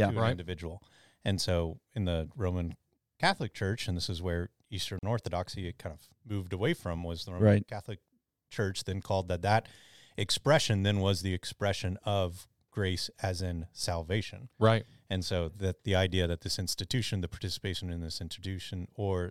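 Right after "and this is where", at about 4.99 s, the speech drops into a 40 ms hole that ends around 5.03 s: a gap at a join of encoded pieces. Two separately encoded chunks were butted together without trimming, so the first one's padded final frame and the next one's start-up delay both stayed in as silence. You hear a quick dropout with softened edges, then the speech picks up exactly where it left off.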